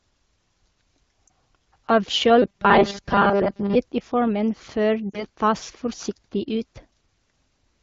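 At 1.28 s a single lost AMR speech frame, about 20 ms, produces a brief dip or warble. The frame failed its checksum, so the decoder bridged the gap by reusing the previous pitch and vocal tract settings at reduced gain.

From 2.42 to 3.76 s the speech turns into a rigid, metallic buzz at 200 Hz that still loosely tracks the words. This robotic sound is likely caused by repeated short buffers: a 5 ms block was replayed while most of the real audio was skipped.

At 5.10 to 5.25 s, just before "tas forsiktig", two more AMR frames are lost, about 40 ms in total. The concealment drops the sound to near silence, and the speech returns weak or rough for a moment.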